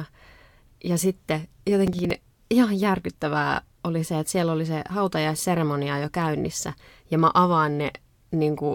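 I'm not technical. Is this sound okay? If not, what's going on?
No. From about 1.87 to 2.11 s, just before "ihan järkyttävää oli se", there is a short burst of processor overload crackle. The computer fell behind and missed a handful of tiny audio chunks, each only a few thousandths of a second long, in a row. For each one it replayed a scrap of old audio, so the speech briefly sounds gritty and torn. Unlike a single click or a loose cable, it is a quick rough patch that clears up by itself.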